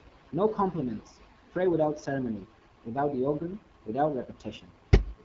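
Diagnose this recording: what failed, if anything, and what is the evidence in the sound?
The codec stage failed. The AMR wideband (HD Voice) codec was running at too low a rate, and its damage is plainly audible across the whole clip. The speech has a rough, raspy texture, and there is nothing above 7.6 kHz. That rasp comes from the pulse-driven vocal tract model being starved of bits, which fits one of the two lowest modes, around 8.85 kbit/s. A narrowband phone codec would cut off near 3.4 kHz instead.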